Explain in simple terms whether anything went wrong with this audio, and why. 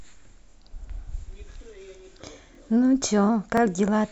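Overlapping chunks: at 0.51, 1.53, 2.55 and 3.57 s, about 23 ms of speech plays twice, a stutter every second. Unlike dropouts, nothing is lost; a bit repeats.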